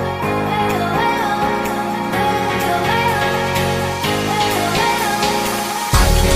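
No technical faults are audible anywhere in the audio.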